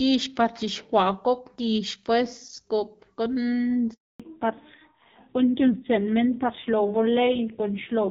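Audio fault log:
3.94–4.20 s, handover gap: the speech dies away within a few tens of milliseconds and stays silent for 260 ms before resuming. The call was passed between networks, and no speech frames arrived during the switch, so whatever was said in that span is lost.
4.20 s to end, fallback to narrowband: from here the speech sounds duller and rougher, with nothing above 4 kHz. Before the gap the wideband HD Voice coding was clear. After it the call dropped to an older narrowband codec, which fits a switch from AMR-WB at 12.65 kbit/s to AMR-NB at 5.9 kbit/s.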